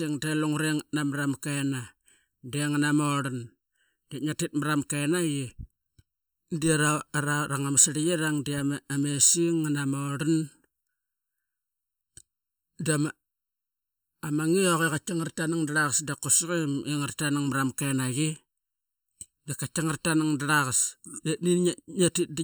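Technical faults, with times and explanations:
Throughout, channel delay (comb filtering): one side lags the other by under a millisecond, so the mono sum cancels at evenly spaced notches from around 700 Hz, leaving the speech hollow.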